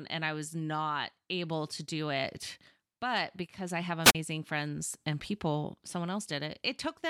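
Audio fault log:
4.03–4.15 s wireless microphone squelch dropout: after "but because I have", a brief hiss, then a 39 ms silent gap as the fading radio signal trips the receiver's squelch.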